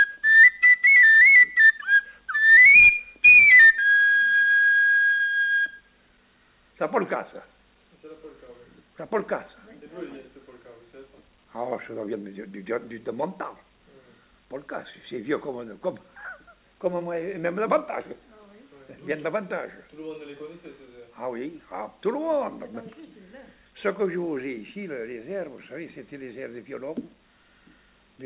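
Nothing stood out on listening, beyond the narrow telephone-style bandwidth, with nothing above 4 kHz, that fits audio carried over a G.711 call path.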